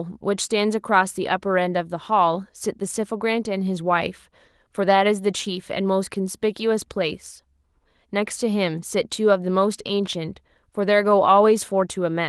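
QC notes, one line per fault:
No faults heard in this speech; only the light texture of Opus voice coding is present, fullband and in keeping with hybrid mode at about 24 kbps.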